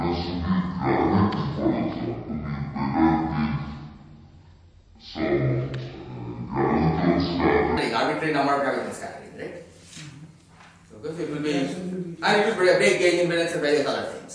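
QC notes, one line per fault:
0.00–7.77 s, wrong sample rate: the sound runs at half speed and a full octave (12 semitones) low, because its samples are read out at half their capture rate without conversion, which fits 44.1 kHz material played back at 22 kHz.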